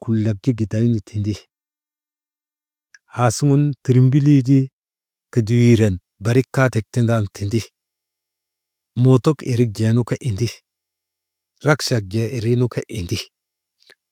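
No technical faults can be heard anywhere in the recording.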